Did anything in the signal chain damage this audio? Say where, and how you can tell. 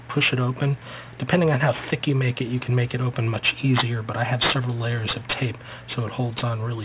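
Yes. Aliasing runs through the whole clip and points to the sample-format conversion stage, which fits a drop from 44.1 kHz to 8 kHz with no anti-alias filter. Content above the 4 kHz fold point mirrors back below it as gritty, metallic tones unrelated to the source, sitting roughly 10 dB under the signal. A properly filtered downsample would simply sound dull. Codec damage would warble and vary over time, not stay fixed and pile up against the band edge.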